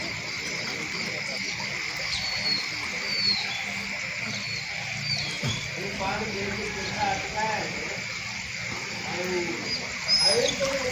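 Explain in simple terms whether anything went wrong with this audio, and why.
Nothing went wrong here; no faults can be heard.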